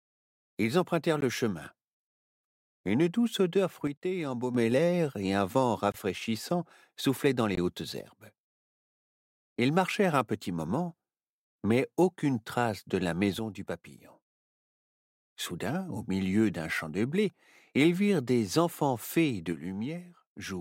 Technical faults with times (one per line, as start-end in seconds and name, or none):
1.21 block of digital silence
3.87-4.55 one channel drops out
5.92-5.94 block of digital silence
7.55-7.57 block of digital silence
8.01-9.20 one channel drops out
13.39-15.15 one channel drops out
19.52-20.61 one channel drops out